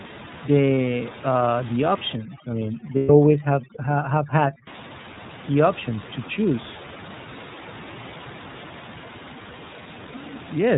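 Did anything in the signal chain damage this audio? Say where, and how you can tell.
Yes. The whole clip has gone through the iLBC codec. Nothing comes through above 4 kHz, and the speech has that slightly rough, synthetic edge you get from coding each frame's excitation on its own. The damage is plainly audible, and it fits the 13.33 kbps mode with 30 ms frames.

On the network side, you can hear lost iLBC frames twice. There's a brief one at 0.76 to 0.78 s, about one frame's worth. A longer one runs 2.97 to 3.10 s, about 120 ms, which fits four frames. Each gap fills with a held, buzzy, vowel-like sound as the decoder repeats the last pitch cycle, then snaps straight back.

There's also overdone noise removal in the call processing, from 2.16 to 4.67 s. The room noise, normally about 16 dB under the speech, drops and breaks up into twinkly specks. The suppressor is cutting quiet speech bands along with the noise.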